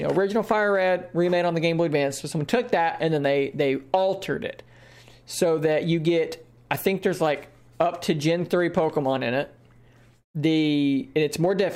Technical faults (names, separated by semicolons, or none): none